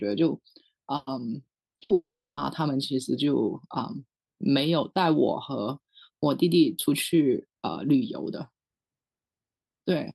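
Speech, heard through an Opus call path limited to about 12 kHz. From 1.53 to 1.91 s, repeated packet loss gives a choppy, robotic sound: five short holes, none longer than 60 ms, each patched by stretching the previous sound. Right after, from 1.93 to 2.39 s, a long network dropout is the likely cause of a single 440 ms loss. Unlike the choppy stretch, the patch fades into about 340 ms of silence before the speech returns.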